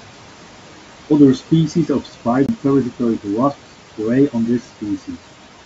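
Throughout the recording, noise suppressor artifacts are present. The suppressor pulls the steady room noise down by about 12 dB frame by frame, so the background dips in the gaps and lifts again under the speech.

From 1.74 to 2.26 s, the noise suppressor cuts speech. It misreads some quieter speech energy as noise and turns it down along with the background, by about 9 dB at the deepest point. Around 150 ms of material in total is affected, and those softer parts sound swallowed and faint.

From 2.46 to 2.49 s there is a CD skip, just before "parasitoid wasps prey". The playback mutes for about 30 ms, then resumes from a different point. This is the laser jumping to another turn of the disc's spiral, so the sound lurches abruptly rather than continuing smoothly.

The room noise sits about 18 dB below the speech. The call path leaves nothing above 8 kHz, which fits a wideband codec such as G.722.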